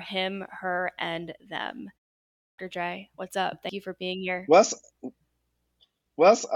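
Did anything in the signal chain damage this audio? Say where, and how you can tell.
Yes, two stages damaged it. At playback, the output device clipped the start after a pause. After "her and them" there is a 0.37 s gap, and the sound resumes abruptly at 2.27 s. About 312 ms is swallowed, up to 2.58 s, while the sleeping device wakes and relocks.

At the codec or storage stage, compressed frames were skipped. At 3.69 s, between "what's up" and "you for being here", the audio jumps ahead by about a tenth of a second, which fits one lost 92.9 ms frame.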